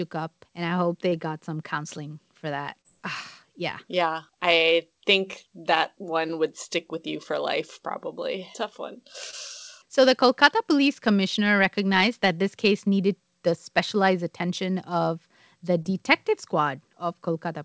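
At 1.10, 2.81, 9.31 and 15.82 s, short concealed packet loss drops 20 ms of speech (40 ms at 2.81 s). The decoder stretches the preceding sound across each gap, heard as a brief smear or wobble and seen as a smoothed, repetitive patch interrupting the spectrogram's fine detail.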